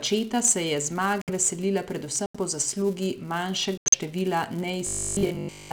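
Throughout the speech runs a steady 200 Hz buzz caused by a filter restarted on every block. Each block begins from silence instead of from the previous state, so a small transient marks every boundary, which points to 5 ms blocks. Unlike mains hum, this buzz grows with loud syllables and nearly disappears in pauses, because each tick scales with the signal level.

Three runs of corrupt frames muted punch holes in the speech: 1.22 to 1.30 s, 2.26 to 2.36 s, and 3.78 to 3.95 s. The holes last about 80, 100, and 170 ms. Damaged compressed frames were rejected by the decoder, and silence was put in their place. The cuts are abrupt, dead silent, and whole multiples of a frame length. Timing stays intact, so speech resumes on schedule, which is what separates this from a dropout that stalls or drifts.

From 4.87 s to the end, the speech turns into a rigid, metallic buzz at 50 Hz. This is robotic sound from repeated short buffers. 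Most likely, new audio arrived too rarely and the last 20 ms was looped while most of the real material was skipped. The syllables are still faintly traceable. The fixed 50 Hz buzz rate, set by the loop length, is what separates it from the level-following 200 Hz block buzz.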